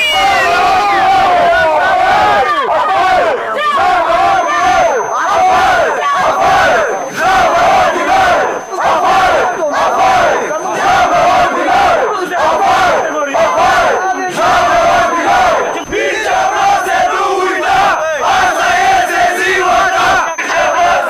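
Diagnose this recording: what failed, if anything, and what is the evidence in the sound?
A feedback whistle enters at 4.22 s and continues to the end of the recording: a thin, steady tone at 6.2 kHz sitting roughly 25 dB beneath the programme, swelling and fading slowly in level but never growing. The likely cause is acoustic coupling in the analogue path, with loudspeaker output reaching the microphone and a loop gain sitting just at the feedback point, so that one frequency sustains itself without running away into howl.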